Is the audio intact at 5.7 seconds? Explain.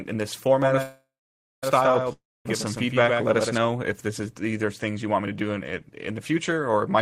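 Yes, the audio at 5.7 seconds is intact, with no dropout, click, distortion or other fault audible at that moment.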